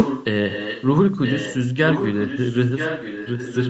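Echo leak runs through this speech clip at 0 to 0.25 s, 0.49 to 0.86 s, 1.23 to 1.68 s and from 1.88 s to the end: a second copy of the voice trails the original by about 0.98 s, some 10 to 15 dB quieter. The likely cause is a far end on loudspeaker whose echo canceller let its microphone's pickup of the call return down the line. Behind it, the band stops at 8 kHz, which fits a wideband Opus call link.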